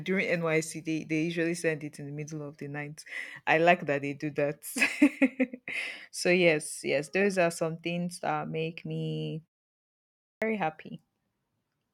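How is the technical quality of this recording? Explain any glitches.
One glitch stands out, a clipped start after a pause at 10.37 to 10.42 s. During the roughly one-second silence before it, the output device appears to have gone idle, and it needed time to wake and lock back onto the signal when sound resumed. The first 47 ms of the returning speech never reached the output, so the speech begins abruptly, its opening sounds shaved off.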